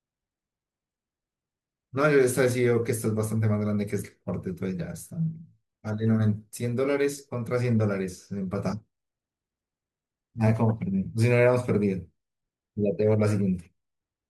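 A drift correction step from 10.46 to 11.05 s speeds the speech up 5.4%, raising pitch about 91 cents, likely a clock-matching rate jump before snapping back.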